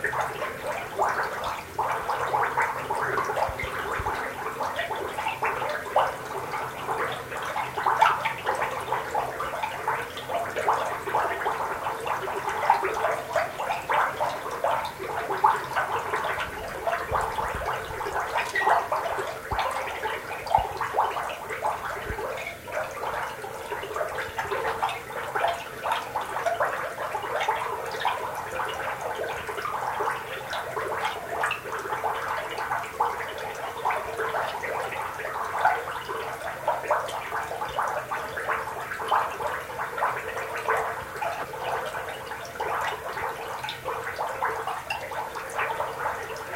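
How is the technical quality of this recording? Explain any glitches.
Nothing here needs explaining; the recording runs along without a single glitch to point to.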